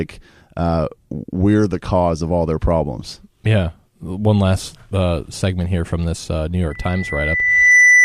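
At 6.70 s a loudspeaker feedback squeal begins: a single 2 kHz tone swells over about a second to well above the speech and lasts until 8.04 s. Unlike a steady interference whistle, it grows by itself, as the microphone-loudspeaker loop exceeds unity gain.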